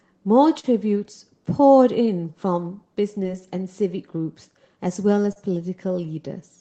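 Short concealed packet loss occurs at 0.59 to 0.65 s, 3.23 to 3.26 s, and 5.32 to 5.45 s. About 40, 20, and 40 ms never arrived. The receiver extended the preceding sound to fill each gap. Each gap is heard as a brief smear or wobble.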